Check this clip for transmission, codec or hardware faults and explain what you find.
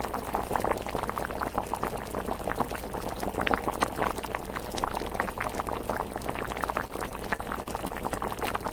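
One transmission fault appears. From 6.87 to 7.92 s the sound turns choppy: repeated packet loss, with several brief holes, the longest about 28 ms, each patched by stretching the preceding sound.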